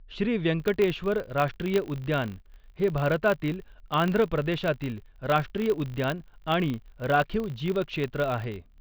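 A filter restarted on every block runs from 0.6 s to the end at 8.8 s. The filter drops its state and begins each block from silence, leaving a small transient at every block start. This makes a 50 Hz buzz, consistent with 20 ms blocks, that swells and fades with the speech level.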